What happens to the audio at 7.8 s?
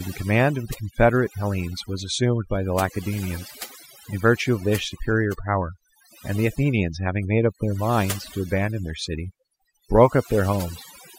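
At 7.8 s you're hearing the same overdone noise removal that runs through the whole clip. The denoiser is set so hard that any frequency band near its noise estimate gets pushed down, quiet bits of speech included, so the gaps sparkle with tiny specks.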